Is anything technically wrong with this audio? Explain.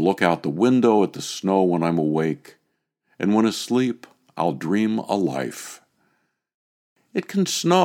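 No, nothing in this speech recording points to a technical problem with the signal.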